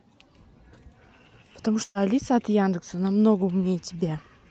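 From 1.83 to 1.98 s, a burst of packet loss interrupts the speech. A short run of packets never arrived in time, so the receiver concealed the gap by extending the last decoded sound for about 114 ms while fading it down, with about 10 ms of near-silence at the end. About 120 ms of speech is missing. The sound becomes a brief held, dimming buzz or hiss, then jumps ahead. Across the Opus call path, the band is limited to about 8 kHz.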